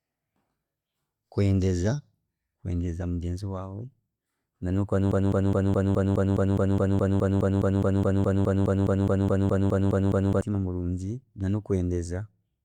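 It's a speech clip, and right after "na nokuba" at 5.12 s it falls into a broken-record loop. A fragment of about 0.21 s plays back to back, identical each time, 25 times over, until 10.41 s. That's over five seconds of stutter, and whatever should have been said there is simply gone. The likely cause is the player, encoder or stream stalling and resending the last chunk it had buffered.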